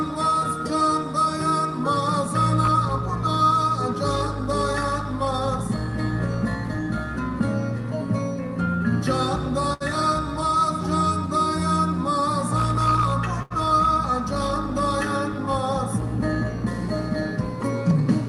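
Short stalls from late packets occur at about 9.73 s and 13.42 s: each time a packet arrived late, the jitter buffer ran dry and the receiver stretched the last sound for 70 ms and 81 ms, then resumed where it stopped, so nothing is lost but the sound briefly hangs.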